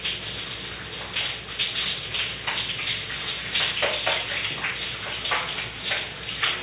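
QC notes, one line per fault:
No faults found.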